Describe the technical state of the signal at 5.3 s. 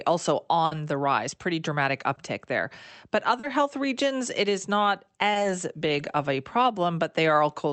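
A brief smear in the speech from 5.33 to 5.37 s is short concealed packet loss: about 20 ms went missing, and the decoder bridged the gap by extending the preceding sound.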